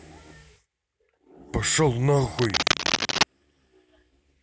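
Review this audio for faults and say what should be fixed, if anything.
Cable scratch noise runs from 2.38 to 3.23 s: dense, uneven scratching about as loud as the speech, likely a worn cable or connector being moved. Replace worn leads and secure connections so nothing shifts during recording.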